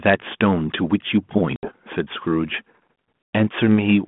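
Packet loss on an ADPCM call hits at 1.56 to 1.72 s, with 70 ms of the 32 kbit/s G.726 call gone (around seven packets), and at 3.26 s, with 110 ms gone (about ten). Each hard-edged gap of silence leaves the decoder's predictor and step size out of step, so the speech resumes slightly distorted before settling.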